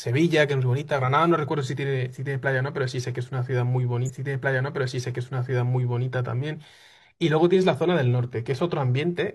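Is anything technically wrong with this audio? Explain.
Yes. From 4.04 s to 6.04 s, about two seconds of the speech play a second time, with a small blip where playback jumps back. This is a stream segment repeated: the player fetched or queued the same chunk twice, adding roughly 2.0 s.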